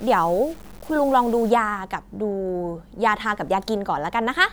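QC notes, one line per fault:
0.0 to 1.5 s, low bit depth without dither: the speech carries a gritty, grainy distortion that rises and falls with it, only about 25 dB down. This points to likely undithered truncation near 7 bits, not steady hiss.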